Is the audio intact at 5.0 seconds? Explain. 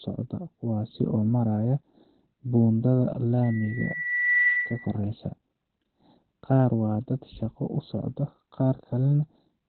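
No, not quite. A loudspeaker feedback squeal runs from 3.43 to 4.97 s, dying out right at that moment. The mic is hearing its own speaker, and around 2 kHz the loop gain tops one, so a pure tone swells over about a second to sit a few dB above the speech.

On top of that, the whole clip is muffled and hoarse, with nothing above 4.2 kHz. That narrowband, heavily smeared sound likely comes from Opus compression dropping into its SILK speech mode at a low rate, which fits something around 12 kbps.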